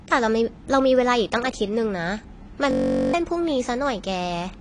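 Likely low-bitrate AAC compression throughout cuts everything above 10.2 kHz, leaving the speech dull, smeared and audibly warbly. From 2.71 to 3.14 s, a system hang loop froze playback on one 21.33 ms buffer, repeating it twenty times as a steady 46.9 Hz buzz that swallows about 0.4 s.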